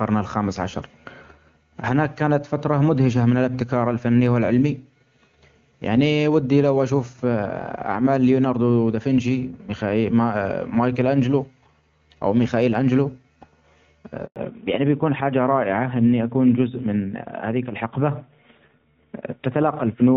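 At 14.26 s the speech cuts out in a handover gap. The call is being passed between networks, and no speech frames arrive during the switch. The sound dies away quickly and stays silent for 100 ms, until 14.36 s. Whatever was said then is gone.

From 14.36 s to the end, the call shows a fallback to narrowband. Before this, the audio has the full, clear band of HD Voice, which fits AMR-WB at a high rate. Now nothing above 4 kHz remains. The speech sounds duller and rougher, which points to AMR-NB at around 12.2 kbit/s.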